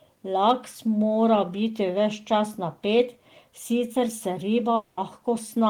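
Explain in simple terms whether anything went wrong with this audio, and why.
Near the end of the speech, from about 4.75 to 4.99 s, the sound stops moving forward. For roughly a fifth of a second the last sound is stretched into a buzzy, hissy tail that fades, and then the speech picks up again with that piece missing. This is likely a long network dropout, where audio stopped arriving and the player filled the hole. Unlike a brief packet loss, which is a tiny blip, this gap lasts longer.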